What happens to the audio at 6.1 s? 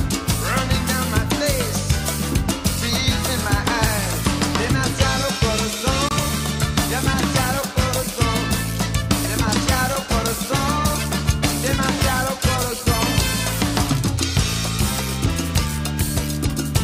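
At about 6.09 s the sound cuts out and the output goes silent for roughly 40 ms, until 6.13 s. When it returns, it picks up further along, as though it had kept playing through the gap, so about 23 ms of material is simply missing. This is most likely a Bluetooth dropout: a packet failed to reach the headphones in time and was discarded. The size of the hole fits a single lost frame.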